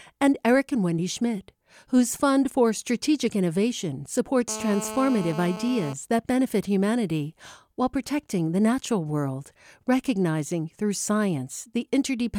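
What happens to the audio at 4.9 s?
At 4.9 s you're inside a stretch of GSM phone buzz running from 4.48 to 5.93 s, ending just before "that benefit humanity while". A nearby 2G handset on a call bursts about 217 times a second, and the audio circuit rectifies those pulses into a harsh, raspy 217 Hz buzz full of harmonics, sitting about 12 dB below the speech.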